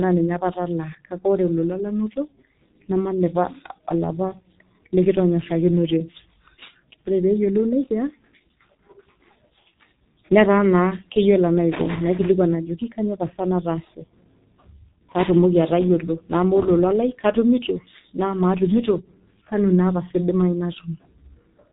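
G.723.1 codec, throughout: heavy low-rate coding, fitting roughly 6 kbit/s, cuts everything above 3.8 kHz, leaving the speech muffled and hoarse, with smeared consonants.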